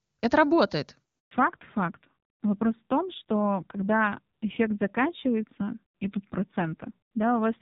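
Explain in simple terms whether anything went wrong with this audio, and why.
Right after "это работает", at about 1.19 s, there's a handover gap: the call switched networks and the speech cuts out for roughly 120 ms, so whatever was said during it is lost.

From 1.31 s to the end it's a fallback to narrowband. The call dropped out of the crisp HD Voice heard at the start, everything above 4 kHz disappears, and the voice sounds duller and rougher.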